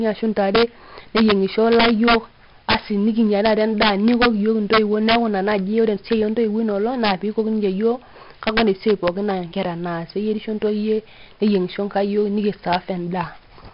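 Across the whole recording, the speech has been driven about 9 dB past the top of its integer range, and the arithmetic wraps instead of limiting. This is integer overflow: any peak that crosses the ceiling flips to the opposite extreme. Only a small fraction of samples, around half a percent, go over, but each one produces a violent crack on the loudest syllables. The cracks are far harsher and more abrupt than ordinary clipping.

Throughout the clip, the signal has also passed through heavy 4-bit ADPCM compression. Each sample is stored as a coarse 4-bit step from a predicted value, with a step size that adapts too slowly for fast changes. The quantisation error rides along as a gritty hiss whose level follows the speech, and sharp attacks distort where the step cannot keep up. Nothing remains above 5.3 kHz, so the sound is dull as well, consistent with a rate of around 44 kbps.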